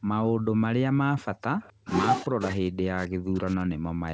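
At 0.00–0.09 s and again at 0.36–0.46 s, the room sound drops out: background gated by the echo canceller. While the far-end loudspeaker was active, the canceller pulled the microphone down by about 40 dB, so the ambience vanishes for roughly a tenth of a second each time before returning.

From 1.60 to 1.73 s a faint delayed copy of the speech surfaces, trailing by 259 ms and sitting well below the main level. This is most likely an echo leak: the far end's canceller failed to remove all of its loudspeaker pickup and sent that residue back.

From 2.21 s to the end, the speech dips very deeply and breaks up in pieces, likely speech suppressed in double talk. With both sides talking at once, the canceller could not separate the local talker from the loudspeaker echo and attenuated everything. The whole clip is band-limited at 8 kHz, which fits a wideband call codec such as G.722.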